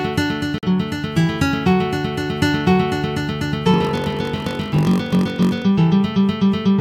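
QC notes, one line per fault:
0.58 to 0.64 s, corrupt frame muted: there's a sudden 60 ms hole where the sound just drops out. A compressed frame got its bits scrambled, the decoder rejected it, and the player filled the gap with silence rather than guess. It's about one frame's worth of missing audio, and because the gap is substituted in place, everything after it stays on time. The abrupt start is the giveaway that this is a dropped frame and not a fade.
3.72 to 5.63 s, block size mismatch (padded): a steady buzz at about 46.9 Hz rides under the sound, and the audio runs slow, at 0.938 times normal speed. One stage is handing over blocks shorter than the next stage reads, so the remainder of each block gets padded with zeros. A tiny gap in every block repeats at the block rate, which produces the buzz, and the padding stretches the timeline. The numbers fit a 1024-sample read block.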